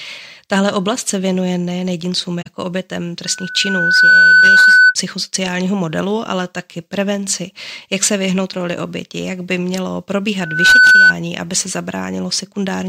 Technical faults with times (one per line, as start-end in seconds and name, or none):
2.41-2.47 AAC frame loss with muting
3.25-4.95 loudspeaker feedback squeal
10.39-11.15 loudspeaker feedback squeal